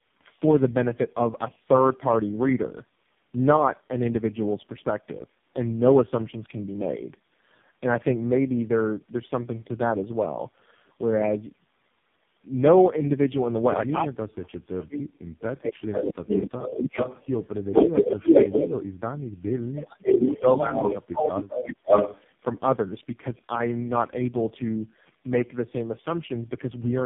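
Throughout, tandem speech coding leaves the audio rough, muffled and warbly, with nothing above 3.5 kHz. This fits four speech coders in a row, ending in low-rate AMR-NB.

From 15.92 to 17.44 s, an echo leak returns a copy about 384 ms late, about 5 dB under the speech. It likely comes from an echo canceller missing loudspeaker pickup.

From 16.81 to 16.99 s, speech is suppressed in double talk. The speech dips roughly 15 dB, likely because the canceller could not tell its talker from the loudspeaker echo during overlap and turned both down.

From 17.77 to 18.6 s, the echo leak returns at the same 384 ms delay, now about 5 dB louder than the speech. It likely has the same cause.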